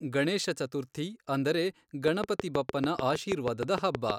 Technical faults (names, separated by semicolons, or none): train of clicks